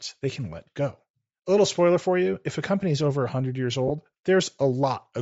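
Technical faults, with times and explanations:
Throughout, Bluetooth LC3 compression: plainly audible grainy, breathy edge as the upper spectrum is thinned and noise-filled, likely a low-bitrate LC3 stream around 32 kbps with 10 ms frames.
3.88 to 3.91 s, lost LE Audio frames: a brief gap where about 20 ms of audio, two 10 ms frames, was concealed by repeating the previous spectrum with randomised signs.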